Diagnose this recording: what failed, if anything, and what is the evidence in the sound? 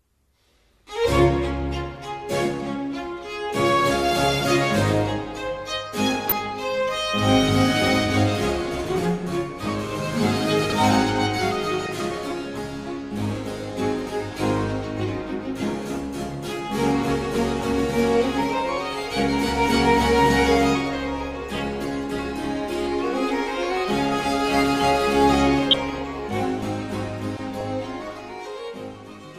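The codec or broadcast reception stage failed, giving DAB burbling at 6.28–6.47 s, 11.72–11.98 s, 25.71–25.99 s and 27.37–27.71 s. Short noise blips in single sub-bands sit over the programme. Residual bit errors of a few in a thousand corrupt sub-band samples and scale factors, so a spectrogram shows isolated bands flaring frame by frame.

At 10.64–10.72 s, chunks out of order point to a buffering or storage fault: one block plays three positions late, which fits 20 ms chunks. It is heard as a brief jumbled stutter, and the waveform shows three hard discontinuities at the joins.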